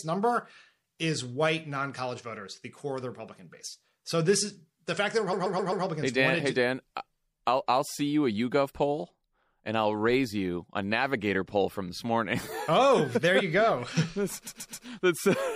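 The whole clip has the watery, swirly treble of MP3 compression, likely from a low bitrate around 64 kbps, with dull highs and smeared consonant attacks. Right after "is the fact that", repeated frames make a stutter from 5.32 to 5.84 s: a chunk of about 130 ms, which fits a run of five MP3 frames, plays four extra times. The same thing happens from 14.46 to 14.85 s, with three extra plays.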